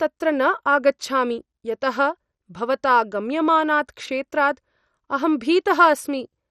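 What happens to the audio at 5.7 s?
At 5.7 s the speech sounds dull and gurgly, with granular distortion and upper bands flickering in and out, and nothing above about 13.3 kHz. This runs through the whole clip. The likely cause is heavy MP2 compression: the sub-bands are starved of bits, so the upper ones switch off and the rest are coarsely quantised, which fits a rate around 56 kbps.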